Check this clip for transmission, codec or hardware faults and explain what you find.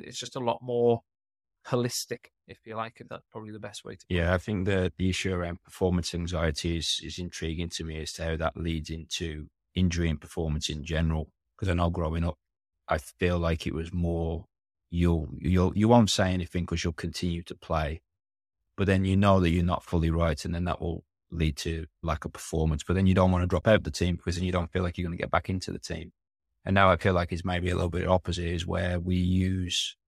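One fault is present in this speech clip. Corrupt frame concealed, 23.60 to 23.63 s, between "you don't want to" and "out the team because": the decoder detected damaged AAC data and covered it over about 28 ms, consistent with a single damaged frame.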